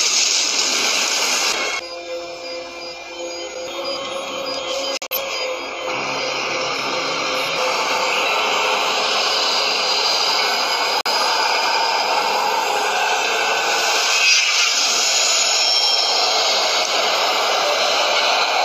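At 4.97 s the audio drops into a corrupt frame muted gap lasting 0.19 s, long enough to suggest several compressed frames in a row were rejected by the decoder after bit damage, with silence substituted. A shorter hole follows at 11.01 s, lasting 0.1 s, which fits a single lost frame. Both start abruptly, and timing is preserved. On a waveform each appears as a flat, near-silent strip; on a spectrogram, a clean vertical blank band across all frequencies.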